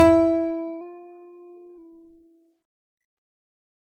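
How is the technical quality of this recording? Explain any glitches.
The music has audible degradation throughout and one brief pitch fault.

Generation loss, throughout: the music sounds swirly, smeared and hollow with blurred attacks, likely from MP3 at 128 kbit/s being re-encoded about five times, each pass adding fresh quantisation damage.

Drift correction step, 0.81 to 1.78 s: the playback speed jumps about 6% and the pitch rises 102 cents, about a semitone, before snapping back. A clock-matching rate adjustment is the likely cause.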